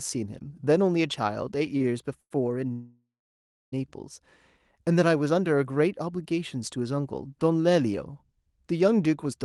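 From 1.77 to 2.32 s the speech shows repeated stalls (stutter): four short holds, the longest 97 ms, filling about 27% of that stretch. Packets arrived late, the jitter buffer kept emptying, and each gap was padded by extending the previous sound, so the speech drags and hiccups while nothing is lost. On a spectrogram these appear as brief smeared, horizontally stretched patches.

From 2.72 to 3.74 s there is a call audio freeze, likely from packets held up in transit. The last sound carries on as a fading buzz, then 0.68 s of silence before the speech resumes where it stopped, about 1 s late. The waveform shows a decaying tail and a flat gap, while the spectrogram, capped near 12 kHz as expected for Opus call audio, shows a blank vertical band.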